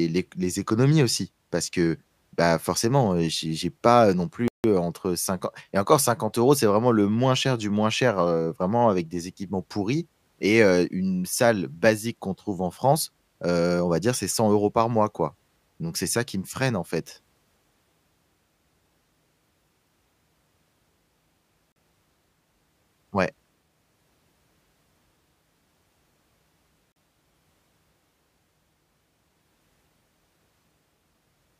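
Block of digital silence at 4.48 s, lasting 160 ms to 4.64 s, then again at 21.72 s and 26.92 s, each 40 ms. In each case a run of samples was replaced by zeros, most likely because the output buffer wasn't filled in time. The speech drops straight to dead silence and returns with no fade. The first is heard as a short hole, and the two later ones as brief dropouts.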